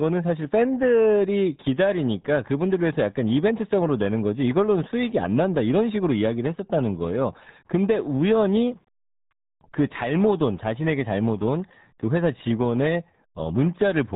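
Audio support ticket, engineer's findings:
RealAudio 14.4 codec artefacts, whole clip: speech muffled and gargly, nothing above about 3.9 kHz. Heavy low-rate coding damage, consistent with an 8 kbit/s stream. Unlike a plain band-limit, the remaining band itself warbles and smears.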